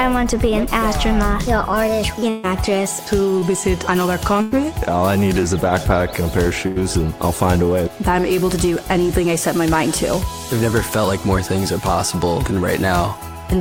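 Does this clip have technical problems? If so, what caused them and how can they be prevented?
Yes. A burst of packet loss hits at 2.29 s, 4.42 s and 6.67 s. The receiver stretches and fades the last sound over 140, 100 and 80 ms gaps. A short concealed packet loss at 3.39 s briefly smears the sound over about 20 ms. Steadier network capacity and a deeper jitter buffer would prevent both.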